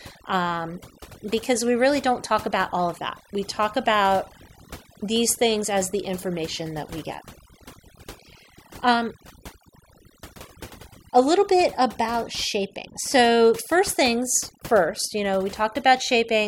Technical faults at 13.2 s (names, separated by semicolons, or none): overdone noise removal